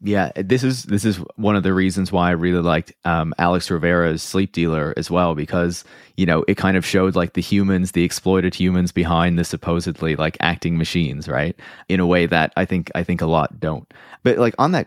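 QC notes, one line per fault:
No faults heard in playback.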